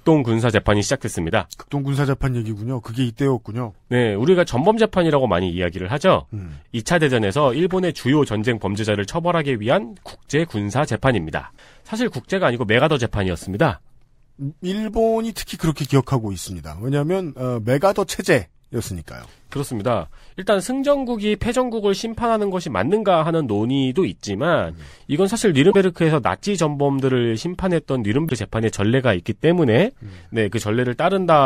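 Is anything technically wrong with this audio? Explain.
Yes, there are two short glitches from damaged data in the compressed stream, at 25.67 to 25.75 s and again at 28.25 to 28.32 s, each about 70 to 80 ms long. A stretch of the encoded data got corrupted, so the decoder couldn't make sense of those frames, lost its sync and had to hunt for the next valid frame header before picking the speech back up. You hear each one as a quick glitch cutting into the speech.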